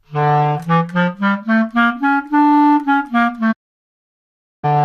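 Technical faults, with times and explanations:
3.51–4.65 s, digital broadcast dropout: the sound fades out over about 20 ms and stays silent for 1.1 s while the receiver mutes on failed frames, which fits roughly 46 lost frames.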